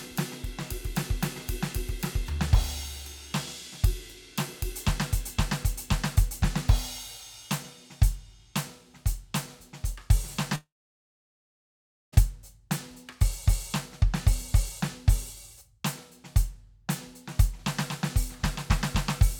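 A long network dropout runs from 10.55 to 12.14 s in this music clip. For about 1.58 s no audio gets through: the last sound carries on briefly as a fading buzz or hiss, then roughly 1.45 s of near silence follows before the music resumes further along, with that stretch simply gone. The likely cause is a break in the network stream, with the receiver padding the gap rather than recovering the lost audio.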